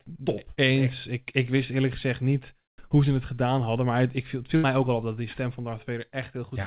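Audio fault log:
4.56–4.66 s, burst of packet loss: Several packets in a row never arrived in time, so the receiver filled about 75 ms by stretching the last sound it had and fading it out, which comes through as a brief held, dimming tail after "het ik viel het" rather than a clean silence. About 80 ms of audio is then gone, and the sound jumps ahead to "ook al op dat". All of it is heard through the call's narrow band, with nothing above 4 kHz.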